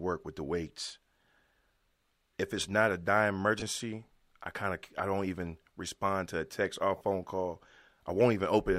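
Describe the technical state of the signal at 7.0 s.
Bluetooth LE Audio frames went missing between 6.97 and 7.01 s, a gap of 40 ms that fits four 10 ms frames. With no data, the LC3 decoder filled the hole by reusing the last good spectrum with randomised signs and letting it begin to fade. At 7.0 s the speech is replaced by that concealment, so the tonal detail smears into a brief hissy, blurred patch before normal audio returns.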